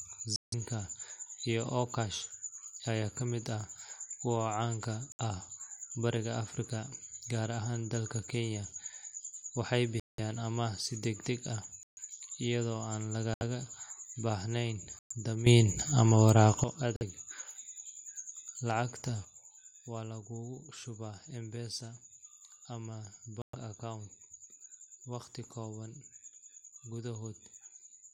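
Speech drops abruptly into dead silence at 0.36–0.54, 5.12–5.20, 10.00–10.20, 11.83–11.99, 13.34–13.42, 14.99–15.13, 16.96–17.03 and 23.42–23.55 s. These are corrupt frame muted gaps, where the decoder rejected damaged compressed frames and the player inserted silence without losing timing. Hole lengths fit frames of about 26 ms. At 15.46 s the speech and its background noise leap up together by about 12 dB, falling back at 16.64 s. From 19.25 s to the end both drop by about 8 dB. These level changes are likely a sudden gain jump, where digital gain changed between adjacent samples without any ramp.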